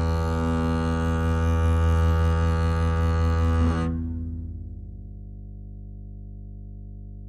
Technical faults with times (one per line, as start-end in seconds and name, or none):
0.00-7.29 mains hum